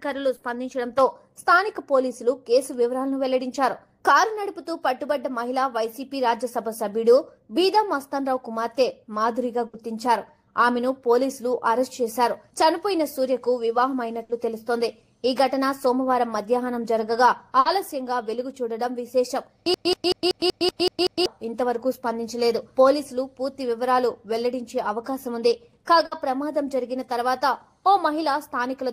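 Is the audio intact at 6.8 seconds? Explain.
Yes, at 6.8 seconds the audio plays through intact, with no dropout, click, distortion or other fault audible at that point.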